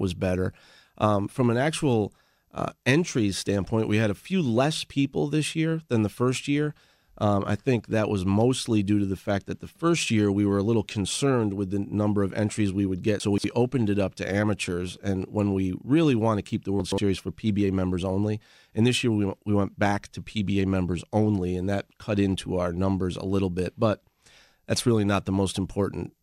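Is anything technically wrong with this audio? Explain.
Yes. Chunks play out of order twice in this speech. At 13.2 to 13.44 s, just after "entries we would get" and before "opened it up to", one 60 ms chunk arrives three chunks late; at 16.8 to 16.98 s, after "want to keep the", another is two chunks late. Nothing is missing, but the shuffled order creates three hard joins per event, heard as a brief jumbled stutter. A waveform shows abrupt discontinuities; a spectrogram shows vertical broadband lines at each join.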